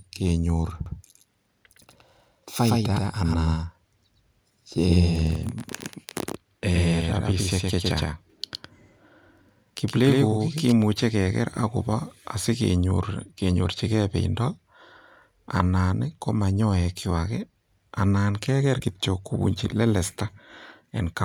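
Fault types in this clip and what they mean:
Doubled audio track: the speech is heard twice from 0.86 s to 10.72 s, with a second full-band copy trailing about a tenth of a second behind at roughly the same level. It's dry and cuts in and out abruptly, likely from a slower duplicate capture path.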